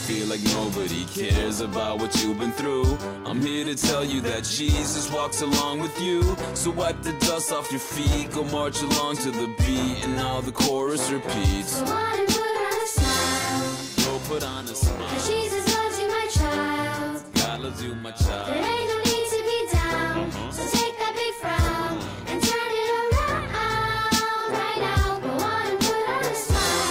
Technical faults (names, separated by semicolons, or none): none